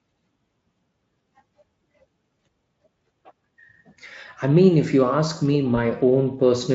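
At about 5.75 s there's a short dropout handled by VoIP packet loss concealment: one 20 ms packet went missing, so the decoder guessed from its last pitch and filter, and a brief buzzy or noisy smear lingers until about 5.84 s as it recovers.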